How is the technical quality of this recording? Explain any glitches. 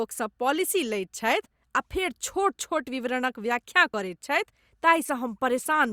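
The recording has one glitch, a brief skip in the speech at 1.46 s, just before "आ फेर". This is audio missing between chunks. The likely cause is a recorder or processor that handles the signal in blocks, here fitting chunks of about 2.5 s, and drops a short slice while closing one block and opening the next. About 20 ms is lost, and the two sides are butted together with no gap, so the sound jumps forward abruptly at that instant.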